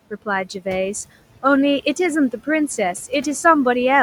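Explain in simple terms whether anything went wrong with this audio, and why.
Throughout the recording, the background noise rises and falls with the talking: it nearly vanishes in the pauses, then creeps back in under the speech. These are noise suppressor artifacts. A noise-reduction stage keeps turning down whatever it judges to be steady noise, moment by moment and pitch range by pitch range. Because it cuts hard, the room noise, itself a normal part of the recording, pumps on and off.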